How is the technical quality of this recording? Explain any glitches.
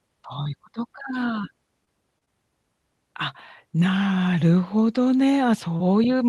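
The recording has five brief glitches from short concealed packet loss, at 0.43–0.47 s, 1.41–1.45 s, 1.85–1.89 s, 2.19–2.23 s and 2.25–2.28 s. In each case about 20 ms of the call arrived too late for the decoder. The receiver covered each gap by extending the preceding sound, following its pitch when voiced and using shaped noise when not, then crossfaded back into real audio. The result is a quick smear or wobble, and a short consonant can vanish. All of this comes through an Opus call path whose highs stop near 12 kHz.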